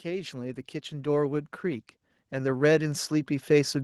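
Automatic gain rising runs from 0.05 s through to the end of the clip. The gain control judged the incoming level too quiet and kept raising its amplification gradually, so the speech and the background noise beneath it swell louder together across the whole clip.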